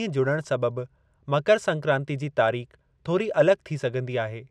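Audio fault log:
Nothing stood out on listening to this speech clip.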